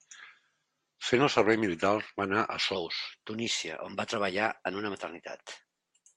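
Right after "anar a", at about 2.76 s, there's a section at the wrong speed running to the end of the clip: the speech jumps to 1.12 times normal speed and about two semitones higher, sounding rushed and squeaky, likely from being played back against the wrong clock.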